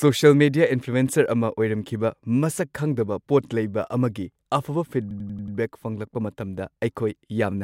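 At 5.11 s the speech catches in a system hang loop until 5.57 s. The machine stalled while the hardware replayed one 93 ms slice of its buffer, which fits a 4096-sample buffer. It repeats five times, a machine-gun stutter at about 11 Hz.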